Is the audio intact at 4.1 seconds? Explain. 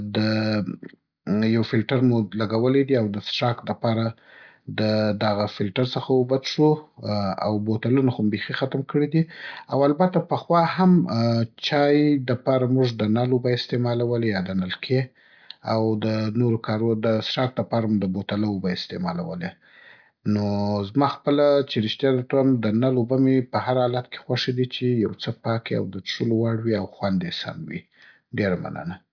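Yes, the audio is intact at 4.1 seconds, with no dropout, click, distortion or other fault audible at that moment.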